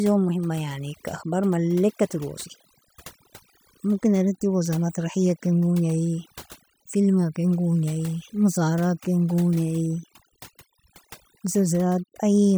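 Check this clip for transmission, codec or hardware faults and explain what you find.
One fault runs through the whole clip: overdone noise removal. A noise reduction stage was set too aggressively. It cuts frequency bands sitting near its noise estimate, taking quiet parts of the speech with them. The background drops and breaks up into twinkling, warbling specks.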